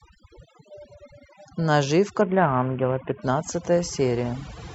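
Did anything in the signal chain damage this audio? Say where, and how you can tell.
Yes. The first problem is overdone noise removal at the call-processing stage, audible for the whole clip. Between phrases the background falls to near silence, broken by twinkling specks. On a spectrogram the gaps look almost black, scattered with isolated bright dots, and the quiet edges of the speech harmonics look eaten away. The suppressor is pulling down every band near its noise estimate, and the low-level speech content goes with it.

The second is a Bluetooth SBC bit pool drop in the codec stage, from 2.21 to 3.22 s. Across that second the treble dulls and a gritty noise rides on the speech, then clears. On a spectrogram the upper band empties abruptly and grainy texture fills the rest, a clean rectangle with sharp edges at both times. The depth of the loss points to the link cutting its bit pool from around 31 to about 5, roughly 50 kbps, so the top sub-bands go unfunded and the remainder is coarsely quantised.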